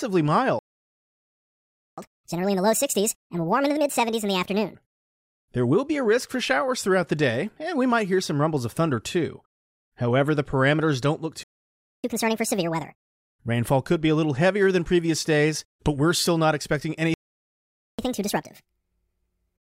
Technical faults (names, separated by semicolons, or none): playback stall; catch-up at higher speed